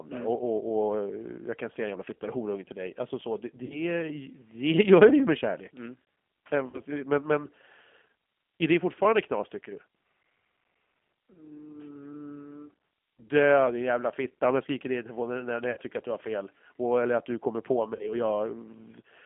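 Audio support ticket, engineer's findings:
G.729 codec, full clip: band held to roughly 200 Hz to 3.4 kHz, speech rough and synthetic throughout, codec damage plainly audible. Fits G.729A at 8 kbit/s, which rebuilds speech from a vocal tract filter, pitch predictor and sparse pulses per 10 ms frame.

VoIP packet loss concealed by the speech codec at 3.66 to 3.91 s, 6.70 to 6.82 s, 15.71 to 15.78 s and 17.95 to 18.15 s. Decoder extrapolates last pitch and filter with falling gain, stretching speech into a decaying buzzy tone or coloured noise. Missing audio about 40 ms per event, 60 ms at 15.71 s, which points to two or three lost packets. Voice stays weak or distorted briefly after packets resume.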